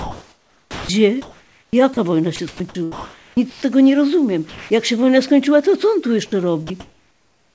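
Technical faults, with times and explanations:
0.00 to 0.89 s and 6.67 to 7.55 s: comfort noise in place of the background. The real room background, sitting about 38 dB below the loudest speech, gives way to a steady, featureless hiss about 3 dB quieter at the start. This is likely discontinuous transmission, with the receiver synthesising noise during pauses.
0.70 to 0.89 s: onset clipped by the voice detector. The first 190 ms of speech never arrive, so the opening begins abruptly without its soft attack. The likely cause is a detector slow to notice speech resuming, with comfort noise filling the gap.
1.22 to 1.97 s and 2.36 to 3.62 s: sound chopped by the voice detector. Speech breaks up, with 540 ms and 780 ms replaced in pieces. Quiet edges vanish. The likely cause is the detector repeatedly toggling transmission on and off.
4.49 to 4.70 s, 6.26 to 6.32 s and 6.7 s: sound dropped by the voice detector. 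Stretches of quiet speech of 180 ms, 50 ms and 30 ms give way to steady noise, then speech returns. The likely cause is the detector mistaking soft speech for background and pausing transmission.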